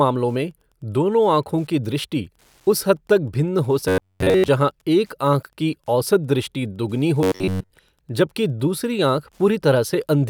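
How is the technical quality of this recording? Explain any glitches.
The recording has two technical faults: a faint ticking that runs through the whole clip, and two brief stretches where the speech turns mechanical.

Wi-Fi interference is present from start to finish. A nearby radio's beacon, repeating every 102.4 ms, is being rectified by the audio circuit, producing a quiet tick about ten times a second, roughly 45 dB below the speech. On a spectrogram it appears as thin, evenly spaced vertical lines.

Robotic sound from repeated short buffers occurs from 3.88 to 4.48 s, right after "भिन्न हो", and from 7.23 to 7.70 s, just before "जबकि दूसरी". Audio likely arrived too late, so a slice of about 10.7 ms was looped in place of the missing signal. Most of the first stretch and all of the second are repeated material. This imposes a rigid 93.8 Hz metallic buzz. The waveform shows identical repeating blocks, and the spectrogram shows a comb of harmonics spaced about 94 Hz apart.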